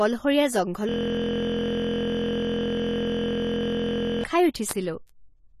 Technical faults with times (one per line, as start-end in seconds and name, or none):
0.00-5.60 AAC compression
0.89-4.24 system hang loop
5.09 bit error spike